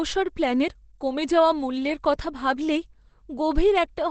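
Throughout, the speech sounds muffled and hoarse, with nothing above 8.5 kHz, likely from heavy Opus compression in its SILK speech mode, fitting about 12 kbps.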